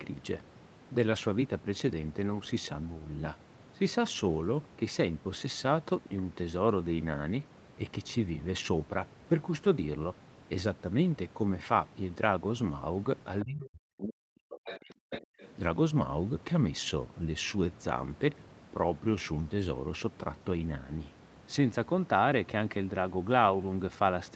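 At 13.40 to 13.44 s a faint scrap of a second voice sits well below the speech, likely the other side's voice leaking through because the echo canceller left some loudspeaker pickup in the microphone signal. From 13.43 to 15.14 s the speech dips very deeply for about one and a half seconds, likely speech suppressed in double talk, with the canceller turning down the near talker along with the echo. Stronger fragments of the far voice come through at 14.65 to 14.93 s and at 15.14 to 15.47 s.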